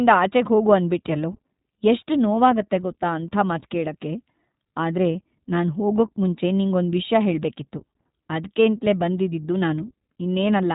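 Right from the start and across the whole clip, the speech carries iLBC codec damage: nothing above about 3.8 kHz survives, and each short frame, which fits the 20 ms, 15.2 kbps mode, is coded independently, leaving a plainly audible rough, slightly synthetic edge.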